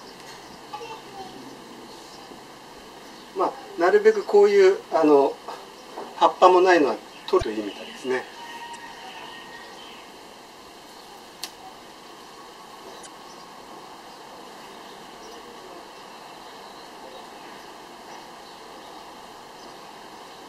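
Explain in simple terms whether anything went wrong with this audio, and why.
Four short glitches come from damaged data in a compressed stream, at 0.70–0.74, 7.38–7.43, 8.71–8.76 and 13.03–13.07 seconds. Each one is a quick chirp or blip lasting about 40 milliseconds. Part of the compressed file got scrambled there, so the decoder couldn't make sense of those bits. It lost its place for a moment and had to hunt for the next clean spot to carry on from.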